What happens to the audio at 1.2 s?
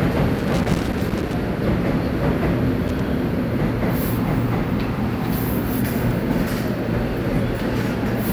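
At 1.2 s the sound is inside a burst of loose connector crackle running from 0.39 to 1.34 s. A worn contact keeps making and breaking, chopping the signal into irregular scratchy pops. That ragged, uneven spacing sets it apart from the evenly spaced clicks of buffer dropouts.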